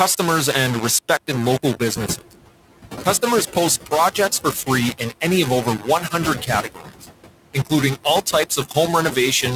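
Across the whole speech clip a coarse, grainy distortion rides on the voice and changes with it. Quiet stretches turn gritty, and the grain sits only about 10 dB under the speech. The likely cause is low bit depth without dither: rounding to very few steps, roughly 4 bits.

Also throughout, the background sinks between phrases and swells under them. These are noise suppressor artifacts from band-by-band gain cuts of about 16 dB.

At about 2.0 s the room noise steps up by about 12 dB. From 1.95 to 2.17 s it comes through with only about 9 dB of reduction, then drops away. This is the noise suppressor catching up, its noise estimate needing 220 ms to adapt.

From 5.65 to 6.14 s, 6.42 to 7.07 s and 8.57 to 8.76 s, parts of the speech go faint and sound swallowed, dipping by about 11, 16 and 11 dB. This is speech cut by the noise suppressor, which treated those softer sounds as noise.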